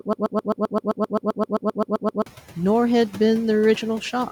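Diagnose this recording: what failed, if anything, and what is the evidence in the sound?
A broken-record loop is already under way when the clip begins and runs until 2.26 s. The same 0.13 s fragment repeats back to back about 16 times, so whatever should have played in those two seconds is gone. The likely stage is playback or stream buffering: a stalled buffer kept handing out its last block. A waveform shows one identical envelope tiled edge to edge, and a spectrogram shows a short pattern stamped out like a comb.

Noise suppressor artifacts run through the whole clip. A call-processing stage pulls down the bands it judges to be steady noise, by about 8 dB. The room noise sits about 17 dB below the speech, and the suppressor lets it sink in the gaps and swell back under the speech. On a spectrogram the noise floor pumps frame by frame. The waveform's quiet stretches shrink and then swell again as the speech returns.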